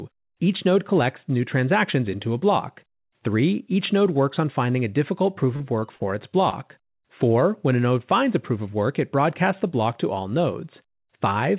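Right after "finding a difficult proof", four bursts of short concealed packet loss land within a second: 5.56 to 5.62 s, 5.80 to 5.84 s, 5.96 to 6.02 s, and 6.50 to 6.54 s. Each gap is 20 or 40 ms of audio that arrived too late. The receiver papered over it by extending the preceding sound, then crossfaded back. Each sounds like a quick smear or wobble. The G.711 call path's 4 kHz ceiling colours them too.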